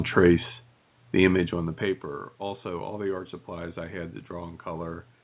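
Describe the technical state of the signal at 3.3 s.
At 3.3 s the signal is intact: there is no fault, only the room noise and the call path's ordinary band limit, with nothing above 4 kHz.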